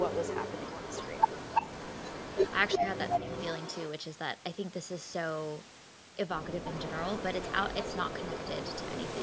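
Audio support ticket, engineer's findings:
Echo leak: delayed copy of the talker about 337 ms behind, at 0–2.78 s, 2.97–3.82 s, 6.68–7.23 s, 7.4–7.53 s, 7.69 s to end. Likely far-end echo canceller letting loudspeaker pickup through. Loudest around 3 s, near speech level.

Speech suppressed in double talk: short dips at 2.78–2.89 s and 3.19–3.29 s, down about 15 dB and 10 dB. Likely canceller ducking the talker while the echo overlaps.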